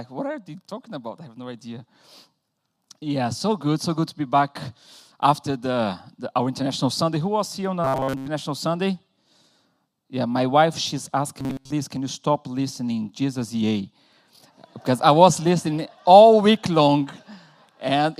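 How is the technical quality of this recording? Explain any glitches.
Two glitches stand out, both robotic sound from repeated short buffers: from 7.84 to 8.28 s and again from 11.40 to 11.72 s. In each stretch the sound collapses into a rigid, metallic buzz at 134 Hz that only loosely tracks what's underneath. The likely cause is audio arriving too slowly, so the playback loops a tiny chunk, about 7.5 ms, which fits that pitch. The first burst is mostly repeats; the second is entirely repeats.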